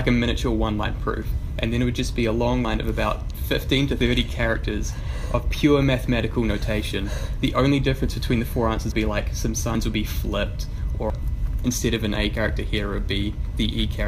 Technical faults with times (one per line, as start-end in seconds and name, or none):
2.65 dropped buffer (overrun)
3.99 dropped buffer (overrun)
8.92 dropped buffer (overrun)
9.75 dropped buffer (overrun)
11.10 dropped buffer (overrun)
12.35 dropped buffer (overrun)